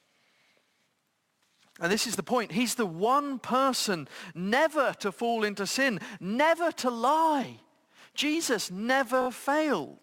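It's a speech clip with a stutter of repeated frames near the end, from 9.21 to 9.27 s. The same 20 ms slice plays three extra times, which fits a single compressed frame being duplicated, and that stretches the audio by 60 ms.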